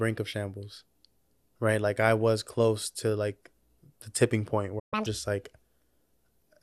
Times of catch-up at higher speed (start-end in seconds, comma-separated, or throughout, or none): 4.94-5.06